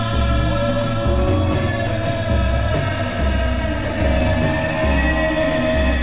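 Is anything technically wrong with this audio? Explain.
Yes, there are two faults in this music, heard through a telephone-band call path with nothing above 4 kHz.

At 1.87–1.89 s there is a skip ahead: roughly 0.7 s of audio was dropped and the two sides were spliced together. Unlike a dropout, there is no silent gap, only an abrupt musical jump.

From 3.67 to 5.96 s, a jitter buffer speed-up trims pitch-period slices to drain excess delay, removing about 200 ms. Playback runs at 110% and the tempo rushes, but unlike resampling, the pitch stays unchanged.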